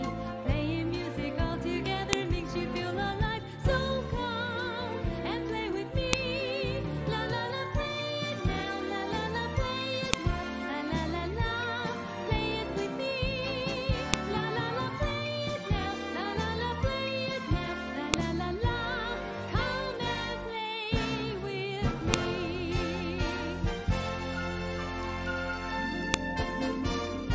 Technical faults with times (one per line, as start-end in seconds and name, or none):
2.13 file header played as audio
6.13 file header played as audio
10.13 file header played as audio
14.14 file header played as audio
18.14 file header played as audio
22.14 file header played as audio
26.14 file header played as audio